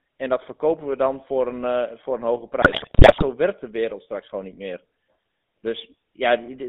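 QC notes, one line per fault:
Throughout, GSM full-rate codec: the speech has a buzzy, gravelly roughness and a narrow band of about 200 Hz to 3.7 kHz. The codec rebuilds each voice from a vocal-tract model driven by coarse, regularly spaced pulses, consistent with a 13 kbps GSM coder.
2.62 to 3.24 s, GSM bit errors: for about 0.6 s the speech breaks into squawks, pops and gargling. Corrupted filter, pitch and gain values reach the decoder, bending the spectrum and jolting the level frame by frame, which points to a badly errored radio link.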